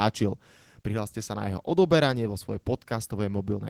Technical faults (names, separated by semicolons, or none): none